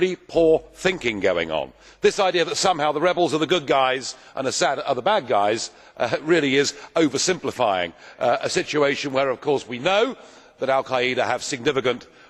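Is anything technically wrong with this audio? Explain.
No, nothing in this audio points to a technical fault.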